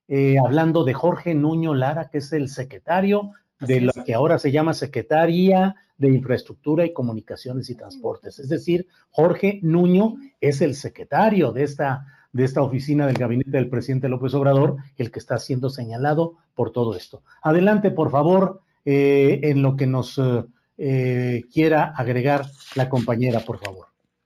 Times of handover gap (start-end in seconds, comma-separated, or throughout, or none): none